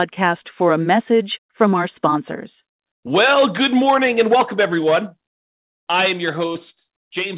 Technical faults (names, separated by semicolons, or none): short concealed packet loss